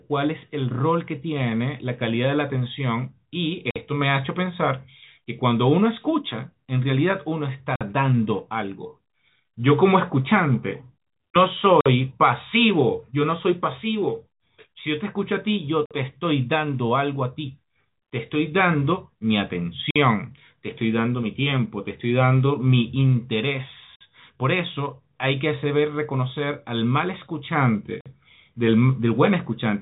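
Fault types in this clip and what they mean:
Gap between chunks: at 3.71, 7.76, 11.81, 15.86, 19.91, 23.96 and 28.01 s, the speech arrives in 4-second blocks, and each join is followed by 50 ms of inserted silence. No speech is lost, but the flow is pushed apart. Each hole recurs every 4.05 s, a steady stutter heard against the narrow telephone band of the G.711 coding, which passes nothing above 3.8 kHz.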